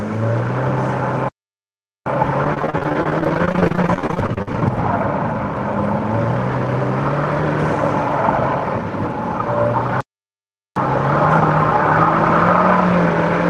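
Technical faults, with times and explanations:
1.29–2.06 s and 10.01–10.76 s, playback stall: the output goes completely silent for about 0.78 s and then about 0.76 s, cutting the sound off mid-flow before it resumes. The likely cause is that the player ran short of buffered data or its playback thread was blocked, leaving nothing to send to the output until it recovered. On a waveform each stall is a flat, silent line. On a spectrogram it is a clean blank column across every frequency, with sharp edges on both sides.
2.44–4.62 s, repeated packet loss (robotic sound): over this stretch the sound turns choppy. Dozens of short holes, the longest about 45 ms, break it up, and about a third of the span is concealed. Each time data goes missing, the decoder stretches the last bit of sound to cover the hole, and the next hole follows almost at once. That constant re-use of recent fragments gives the buzzy, robotic quality, with pieces of the sound simply gone. 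On a spectrogram the region shows smeared, repeated horizontal streaks and frequent small breaks, with energy fading toward the Opus call path's ceiling near 12 kHz. The waveform looks stuttered, with copied-looking cycles and uneven dips.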